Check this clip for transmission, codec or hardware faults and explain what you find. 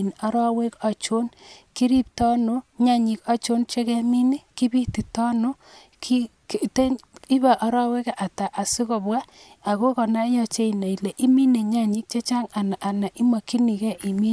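No transmission, codec or hardware faults.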